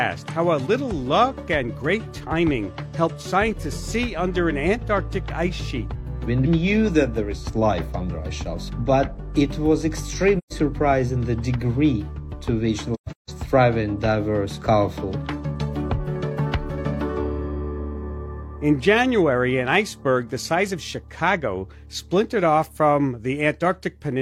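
At 10.38 s the audio drops into a soft-edged hole lasting about 0.13 s, then again from 12.94 to 13.30 s as a broken series of gaps, the longest run around 150 ms. This is AAC frame loss with muting. The decoder zeroed the spectrum of the missing frames, and the overlapping windows fade the sound out and back in. Unlike a hard dropout, the edges are faded rather than abrupt. Unlike concealment, the gaps are silence, with nothing repeated or smeared. The lengths fit whole frames of roughly 43 ms.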